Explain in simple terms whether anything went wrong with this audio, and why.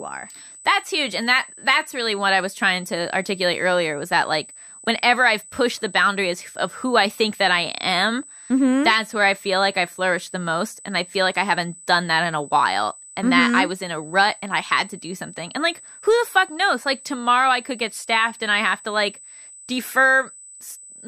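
USB whine: power pulses from the USB connection leaked in, adding a steady high-pitched tone at 8 kHz, strongest at 16 kHz, throughout the speech.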